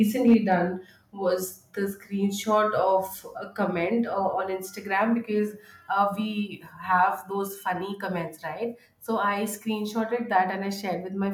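From 0.27 to 0.53 s the speech shows microphone overload: loud peaks are flattened, a few percent of samples pinned at the limit, giving a harsh crackle. The likely cause is input gain set about 3 dB too high for the converter. At 0.34 s, inside that stretch, the microphone volume steps down by about 2 dB, and voice and background drop together. A second step of about 2 dB comes at 7.47 s, between "because uh we have" and "funny comments right". Both sudden level drops are likely the call software cutting the device's input volume in one step.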